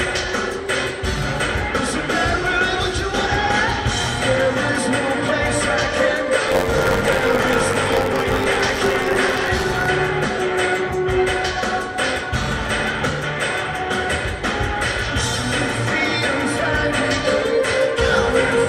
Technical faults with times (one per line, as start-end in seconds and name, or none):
6.47-9.86 buffer tearing